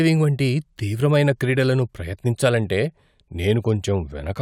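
No technical faults are audible.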